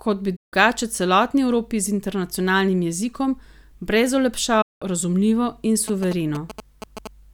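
At 0.36 s and again at 4.62 s, a digital broadcast dropout mutes the speech. Lost frames cut it off with a quick fade to silence, losing about 0.16 s and 0.19 s. From 5.88 to 7.07 s, GSM signalling bursts from a nearby phone are rectified into a galloping pattern of short 217 Hz buzzes, about 10 dB below the speech.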